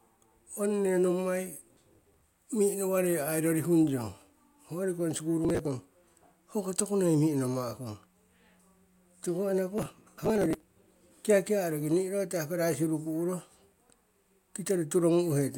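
Speech with bursts of gritty, tearing crackle at 1.73 to 2.21 s (ending just before "mi'inowarei ai rorihung"), 5.45 to 5.67 s and 9.78 to 10.63 s. This is processor overload crackle: the processor missed many short buffer deadlines in a row, each dropping a sliver of sound.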